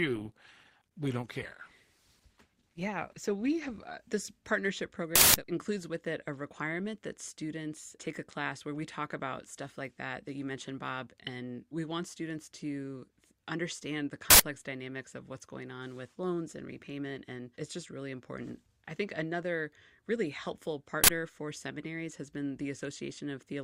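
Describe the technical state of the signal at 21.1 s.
At 21.04 to 21.08 s an uninitialised buffer plays leftover memory as samples: a loud 46 ms digital-noise burst, a broadband spectrogram slab, fitting a 2048-sample block.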